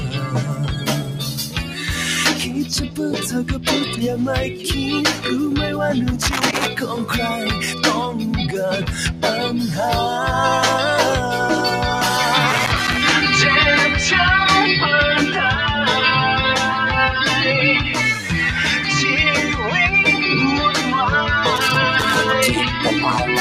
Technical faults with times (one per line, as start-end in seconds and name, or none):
0.00-23.41 noise suppressor applied to music or sounds
0.00-1.77 sound cut by the noise suppressor
2.48-2.99 sound cut by the noise suppressor
3.50-3.67 sound cut by the noise suppressor
6.22-6.67 loose connector crackle
12.50-13.01 loose connector crackle
21.56-22.16 loose connector crackle